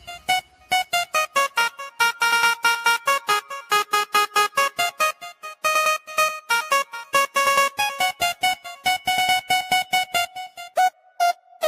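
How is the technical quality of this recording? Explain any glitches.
The technical quality isn't great. A noise suppressor built for speech is running over audio that isn't speech, and it keeps mistaking steady material for noise. Sustained parts and decaying tails get pulled down by up to around 10 dB while attacks survive, so the level pumps and thins.

You can hear the sound cut by the noise suppressor at 0.0–1.14 s (about 11 dB down), 5.14–5.64 s (about 12 dB), 6.85–7.36 s (about 9 dB), 10.92–11.19 s and 11.35–11.62 s (both about 11 dB). Each time, held or fading sound gets squashed for a few hundred milliseconds.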